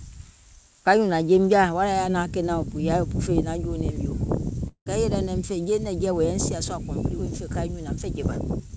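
A call audio freeze at 4.68 to 4.88 s: packets were likely delayed, so the emptied jitter buffer stretched the last sound into a fading buzz or hiss, then brief silence, before "kɛɛ yèlɛ naim fè" resumes intact.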